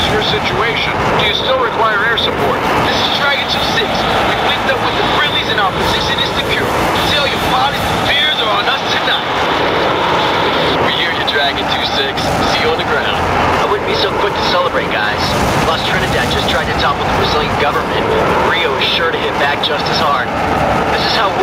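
Gain pumping runs through the whole clip, most likely from input gain set far too high with a fast limiter clamping down on every loud sound. The gain swings by roughly 10 dB around loud moments, leaving the sound squashed and breathing.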